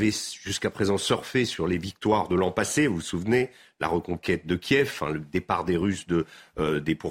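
A short recording of speech, with no technical fault to be heard anywhere in it. Nothing turns up at any point, so there are no times or causes to report.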